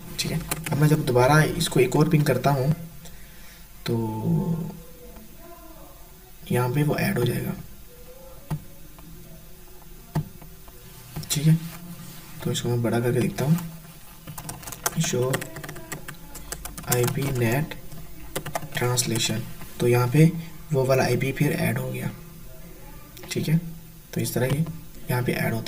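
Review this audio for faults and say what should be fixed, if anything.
Channel delay (comb filtering) runs through the whole clip. One channel arrives around 5 ms late, and summing to mono cancels energy at evenly spaced frequencies starting near 100 Hz. The result is a hollow, phasey tone. Align the channels before the mono fold-down.

Regular clicks recur every 2.42 s from 0.28 s to 24.53 s, about ten in all. These are most likely clock drift buffer slips. Two free-running clocks disagree by roughly 500 ppm, which fits around 70 samples being dropped or repeated at each slip. Lock both devices to a shared word clock or use asynchronous resampling.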